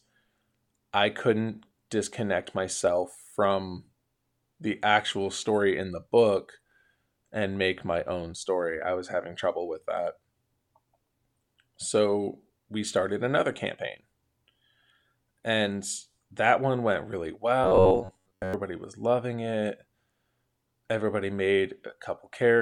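At 17.64 s the speech turns into robotic sound from repeated short buffers, lasting until 18.54 s. It becomes a stiff, metallic buzz pitched at 93.8 Hz that only loosely tracks the speech. The likely cause is audio arriving too slowly, with the last chunk of roughly 10.7 ms replayed over and over for most of that stretch. A spectrogram shows evenly spaced horizontal harmonic lines at multiples of 93.8 Hz, and the waveform shows identical short cycles.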